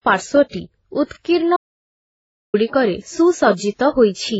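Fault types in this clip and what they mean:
Transcoding between lossy codecs: The speech carries the smeared, watery artefacts of several lossy codecs stacked together, likely from passing through low-bitrate AAC, then MP3, then WMA. Nothing remains above about 7.7 kHz. Each stage kept the earlier damage and added its own.
Audio dropout to silence: The speech cuts out abruptly at 1.57 s and returns mid-flow at 2.54 s. The gap of about 0.97 s is dead silence, with no room tone at all. This likely points to lost input while recording continued writing silence.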